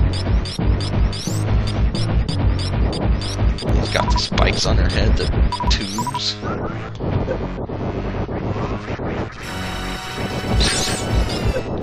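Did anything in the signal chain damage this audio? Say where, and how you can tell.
Yes. The damage happens at the network/streaming stage, from overlap between stream segments. Short skips at 1.68 s, 3.69 s and 5.67 s, about 2 s apart, fall at segment boundaries where the player trimmed a few milliseconds. The waveform shows a sudden step, and a spectrogram shows thin broadband vertical lines.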